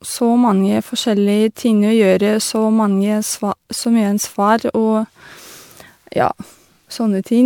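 Generation loss runs throughout: swirly, hollow, smeared speech with blurred attacks, beyond what one MP3 pass near 128 kbit/s explains, likely about seven re-encodes.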